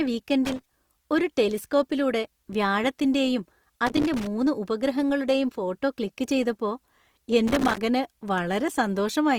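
Throughout, the speech carries plainly audible codec damage, likely from Opus compression in its music mode at a low rate, around 24 kbps. Short of bits, the encoder fills bands with folded or noise content, so the speech turns grainy and rough while bandwidth stays full, reaching about 20.2 kHz.

A loose connector crackle bursts in from 0.45 to 0.73 s, again from 3.86 to 4.27 s, and from 7.47 to 7.82 s. A worn contact repeatedly makes and breaks, chopping the signal into an irregular spatter of scratchy crackle layered over the speech.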